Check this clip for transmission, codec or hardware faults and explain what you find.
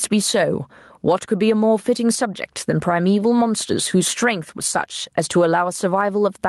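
One fault runs through the whole clip: gain pumping. The level is pulled down each time the speech gets loud, swinging by roughly 15 dB. The likely cause is input gain set far too high, with a fast limiter or compressor clamping down on each peak and releasing between them. Unlike a noise gate, the floor never cuts to silence, and the speech itself sounds squashed and flat in dynamics.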